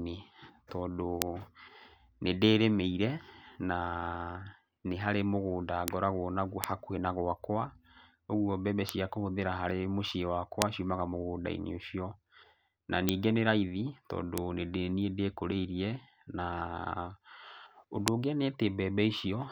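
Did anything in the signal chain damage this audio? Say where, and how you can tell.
Yes, bit error spikes from the digital side, storage or a link. There are eight sharp broadband ticks at 1.22, 5.88, 6.64, 8.89, 10.62, 13.09, 14.38 and 18.08 s, reaching about -2 or -8 dBFS and unrelated to the speech. They sound like flipped bits briefly throwing a sample or so by a power of two.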